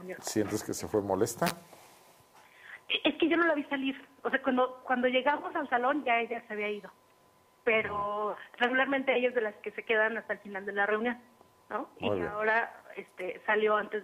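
No technical faults can be heard anywhere in this audio.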